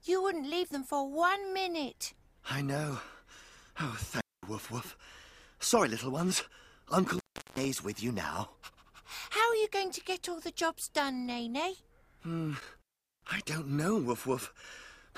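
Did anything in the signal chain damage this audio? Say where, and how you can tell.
Yes: an intermittent contact in the analogue wiring opened three times, at 4.14–4.48 s, 7.07–7.65 s and 12.59–13.46 s, dropping the sound to faint hiss with crackle at each edge.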